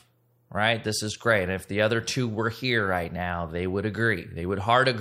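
No technical fault can be heard anywhere in the speech, from its first moment to its last.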